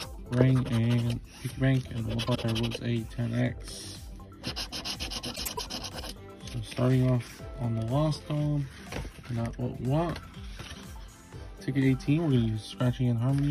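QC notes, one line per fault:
2.27–2.45 s and 5.35–5.60 s, frames out of order: two adjacent blocks of frames arrived swapped and were decoded in that order. Each stretch plays with its halves exchanged, a garbled flutter. The blocks run about 78 ms and 105 ms, which fits three and four frames each. No time is lost.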